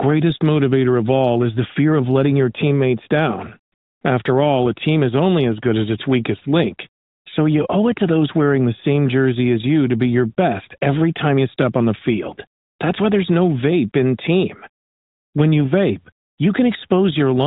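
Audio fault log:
13.87–13.90 s, AMR bit errors: a brief hoarse, gargly scratch in the speech. A few percent of the weakly protected bits in the narrowband AMR stream arrived flipped while the checksum still passed, so pulse positions and the finer pitch, gain and spectral values decoded wrongly.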